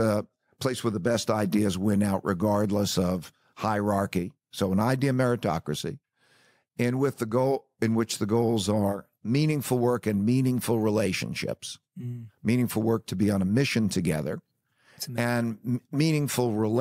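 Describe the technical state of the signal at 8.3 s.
At 8.3 s the signal is intact, with no audible fault at that point.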